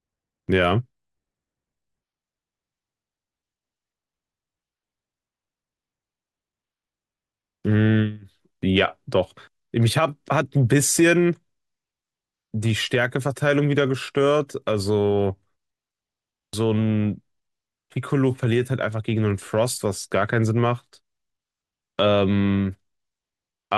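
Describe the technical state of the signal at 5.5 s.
At 5.5 s the speech signal is intact, with no dropout, clipping, glitch or other fault.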